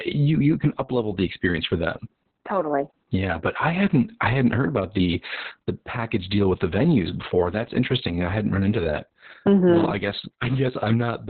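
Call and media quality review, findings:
Opus voice compression, whole clip: speech muffled, hoarse, faintly robotic, nothing above 4.3 kHz. Narrowband SILK mode, sound points to roughly 6 kbps with long frames. Linear-prediction coder starved of bits, excitation coded coarsely, band squeezed hard. Heavy codec damage throughout.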